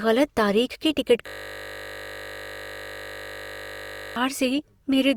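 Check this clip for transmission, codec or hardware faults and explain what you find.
One hardware/driver fault: a system hang loop from 1.28 s to 4.16 s. The computer or audio driver stopped supplying new samples while the sound hardware kept replaying the same 20 ms stretch of its ring buffer, repeating it about 140 times. Because the loop is so short, the speech vanishes into a steady, mechanical buzz pitched at the 50 Hz repeat rate, and it lasts nearly three seconds before normal audio resumes.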